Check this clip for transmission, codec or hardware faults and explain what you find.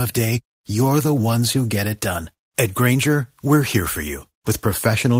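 One transmission fault is audible in the speech. A lost packet rebuilt from error correction occurs from 1.15 to 1.21 s, just before "who get it done." Packets went missing in transit, but each following packet carried a reduced-bitrate duplicate, which the decoder substituted, so nothing drops out. About 40 ms was reconstructed, which fits two separate 20 ms packets. That stretch sounds briefly coarser and grainier, a short roughening rather than a silence.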